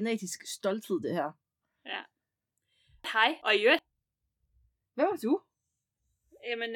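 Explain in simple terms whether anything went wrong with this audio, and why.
Between 3.04 and 3.79 s the speech briefly scrambles: frames out of order. Two adjacent chunks of about 0.37 s each were decoded in swapped sequence, so the second half plays before the first, producing a garbled flutter. Nothing is lost.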